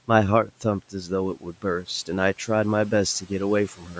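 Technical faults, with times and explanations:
0.9–1.1 s, 1.35–1.64 s, 3.77–3.97 s: speech cut by the noise suppressor, which treated parts of the speech as background and lowered them by about 10–12 dB, so they sound swallowed.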